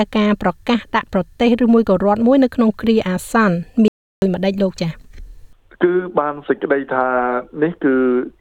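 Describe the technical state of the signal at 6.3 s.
At 6.3 s the signal is intact, with no dropout, distortion, glitch or other fault audible at that moment.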